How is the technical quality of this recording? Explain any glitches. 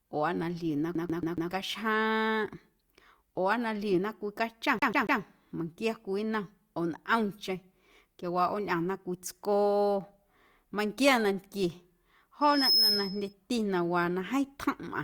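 The recording has two kinds of fault: a stuck CD loop that occurs twice, and a feedback squeal near the end.

A scratch sends the laser back a track at the same point each turn, so the CD is stuck on one turn from 0.95 to 1.51 s, after "na ljiuna", and from 4.79 to 5.21 s, after "na ljiuna cwii cachom" and before "meiⁿnquia cwii". A 140.82 ms slice of speech repeats four and then three times, with a small mute at each jump, giving a rapid, even stutter.

From 12.41 to 13.33 s, just before "na waa na", loudspeaker feedback squeal sets in. The microphone picks up its own speaker and the loop gain passes one at 5.2 kHz, so that tone builds over roughly a third of a second into a piercing whistle about 5 dB above the speech.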